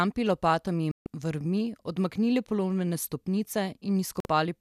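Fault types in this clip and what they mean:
digital broadcast dropout: the receiver muted on failed frames, leaving silent gaps at 0.91–1.07 s before "vrvmi odmaknili polomljene" and 4.20–4.26 s: flat waveform, blank spectrogram columns.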